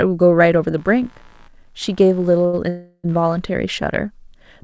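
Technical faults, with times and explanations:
0.78–3.40 s, computer activity noise: a faint buzz pulsing roughly 70 times a second sits under the speech, around 35 dB below it. It tracks the machine's load rather than the talker, since processor or graphics activity is disturbing the audio circuit's shared ground.
2.46–2.55 s, short stall from a late packet: a sound hangs on for an extra 68 ms with a slight buzz or dip. A packet showed up late, the jitter buffer ran dry, and the receiver held the last sound until it arrived. Nothing is lost, but everything after is 68 ms later.
2.69–3.06 s, call audio freeze: the speech stops moving and the last sound drags on as a fading buzz or hiss for about 347 ms, dipping briefly to near-silence for about 10 ms. The likely cause is packets held up in transit, which emptied the jitter buffer. Playback then resumes where it stopped, so nothing is missing. 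This passage comes through the G.722 call path, which has no content above 8 kHz.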